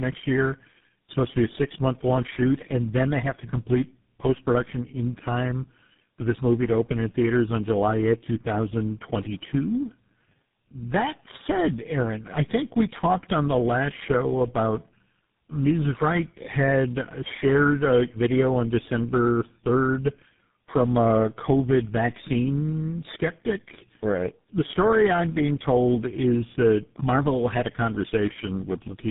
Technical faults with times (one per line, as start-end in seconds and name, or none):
0.00-29.11 tandem speech coding